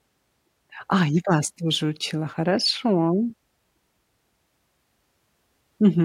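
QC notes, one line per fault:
No faults heard anywhere in this speech recording.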